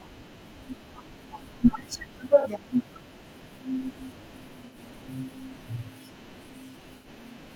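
AAC frame loss with concealment hits the speech at 2.40–2.47 s (about 43 ms, fitting one lost frame), 4.66–4.77 s and 6.96–7.07 s (about 85 ms, two frames). The decoder rebuilds each gap from the previous spectrum, heard as brief smeared, phasey patches and seen as blurred, flattened spectrogram columns.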